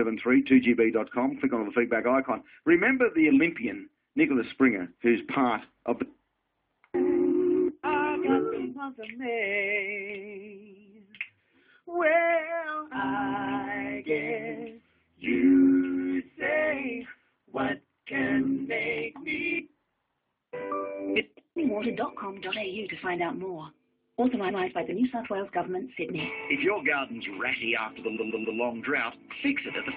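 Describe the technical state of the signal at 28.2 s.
At 28.2 s the signal is in a stretch of repeated frames running from 28.16 to 28.57 s. A 139-ms block of compressed audio, which fits a run of about six frames, is decoded three extra times, so the same fragment stutters and the clip grows by 418 ms. On a spectrogram the same pattern repeats side by side. The waveform shows identical shapes copied end to end.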